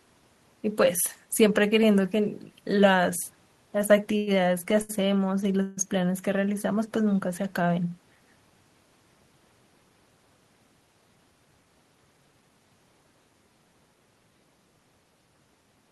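At 4.17 s and again at 4.82 s, a short stall from a late packet empties the jitter buffer, so the receiver stretches the last speech sound for about 96 ms, then 75 ms, leaving a held, faintly buzzy sound. At 5.62 s a call audio freeze, likely from packets held up in transit, fills about 150 ms with a fading buzz before the speech resumes where it stopped. The call codec's coding noise and top end near 12 kHz are present throughout, which fits Opus at a low bitrate.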